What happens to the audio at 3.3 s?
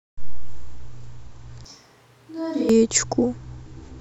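At 3.3 s the speech continues intact, with no fault at that moment.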